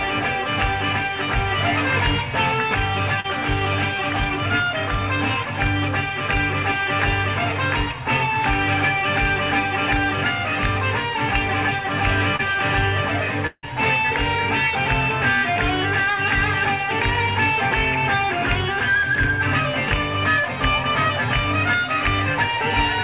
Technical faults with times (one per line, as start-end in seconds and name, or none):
3.20-3.26 short concealed packet loss
12.36-12.41 short concealed packet loss
13.47-13.65 long network dropout